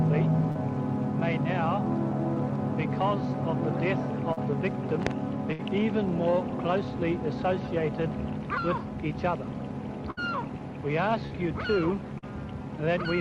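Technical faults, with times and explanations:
0.51–0.57 s, 4.33–4.39 s, 11.27–11.32 s, 12.18–12.24 s: short concealed packet loss. Each time, 40 ms of audio arrived too late. The decoder filled the hole by extending the preceding sound, then blended back. It is heard as a brief smear or wobble.
5.53–5.61 s and 10.11–10.19 s: burst of packet loss. About 60 ms of audio went missing in one run. The receiver stretched the last sound across the gap and let it fade, giving a held buzz or dimming hiss before the audio resumes with that stretch gone.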